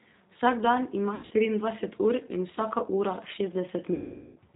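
Throughout, the speech sounds slightly rough, synthetic and muffled, with nothing above 4 kHz. That is the G.729 codec at 8 kbit/s, which rebuilds each 10 ms frame from a vocal tract filter, a pitch predictor and a few pulses, so the damage is plainly audible.

From 1.15 to 1.33 s the speech breaks into short buzzy or noisy, fading stretches. About 140 ms went missing over 160 ms, the longest gap 80 ms: VoIP packet loss concealed by the speech codec, which extended the last pitch and filter at falling gain. From 3.94 to 4.38 s a longer 420 ms loss smears into a decaying tone or coloured noise that fades out, and recovery after it stays weak.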